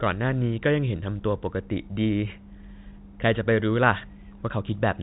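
No technical faults can be heard anywhere in the recording. The speech has passed through G.711 telephone coding, which gives it the narrow band of a fixed-line call, with nothing above about 3.8 kHz.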